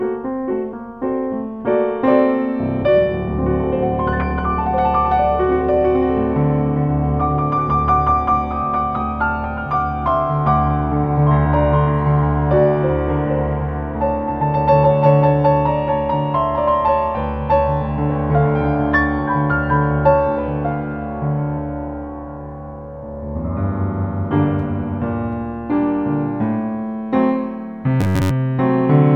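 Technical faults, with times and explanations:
28.01–28.30 s, robotic sound from repeated short buffers: a rigid 93.8 Hz buzz, likely from a 10.7 ms chunk replaying over most of the audio, shows as identical repeating waveform cycles and evenly spaced spectrogram harmonics.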